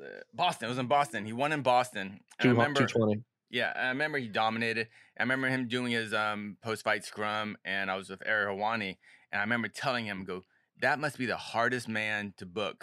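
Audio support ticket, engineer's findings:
No audible faults found.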